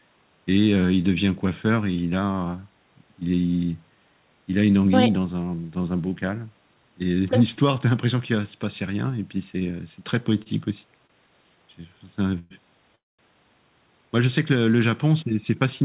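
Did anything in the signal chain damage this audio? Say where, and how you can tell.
Yes, at the network and jitter-buffer stage. There are two short stalls from late packets, at 10.43 s and 11.07 s. Each holds the preceding sound for about 28 ms with a faint buzz or dip, then resumes where it stopped. Nothing is lost; playback just slips 28 ms later each time.

Call audio freezes follow at 12.38 s and 12.95 s, likely from packets held up in transit that drained the jitter buffer. The first is filled with a fading continuation for 118 ms. The second lasts 233 ms, 210 ms of it silent, before the audio picks up intact.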